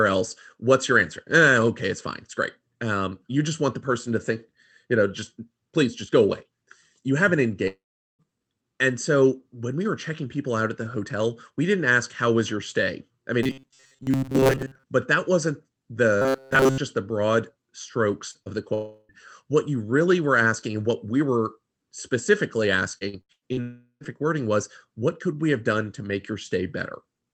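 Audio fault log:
7.67–8.22 s, 18.74–19.12 s and 23.61–24.03 s: long network dropout. Each time, between about 0.36 and 0.52 s (0.52 s, 0.36 s and 0.40 s) of sound goes missing, likely because packets stopped arriving. The receiver carries the last sound forward as a fading buzz, and the audio resumes with that stretch simply gone. At 7.67 s the fade ends in about 0.4 s of near silence, a flat gap in the waveform. At 18.74 s the smear fills the whole hole. At 23.61 s only about 90 ms goes silent. On a spectrogram, each dropout shows smeared, blurred harmonics that thin out before normal detail returns.
13.43–14.84 s and 16.22–16.78 s: robotic sound from repeated short buffers. A fixed 133 Hz metallic buzz is imposed on the speech, which likely means new audio arrived too seldom and the player looped a piece about 7.5 ms long. In the first stretch most of the sound is repeated material, and in the second all of it is. 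The buzz still roughly follows the speech. A spectrogram shows rigid, evenly spaced horizontal harmonics at multiples of 133 Hz, and the waveform shows a strictly periodic pattern.
18.31 s and 18.42 s: short concealed packet loss. About 40 ms is lost in each of these two close gaps, and roughly 35 ms of each is patched by extending the preceding sound before it blends back into the real signal. This is heard as a quick smear or wobble, and any brief consonant caught in a gap can disappear. On a spectrogram, each gap appears as a short, blurred patch where the fine detail is smoothed over. In the waveform, each shows as a slightly too-regular segment.
22.98–23.60 s: repeated packet loss (robotic sound). Five separate gaps fall within this stretch, the longest about 81 ms, and together they take out about 0.28 s. That means 44% of the span is patched rather than real. Because each patch is quickly followed by the next loss, the sound becomes choppy, and it runs straight into the dropout at 23.61 s. 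A spectrogram shows a stuttering sequence of smeared blocks broken up by brief stretches of genuine detail.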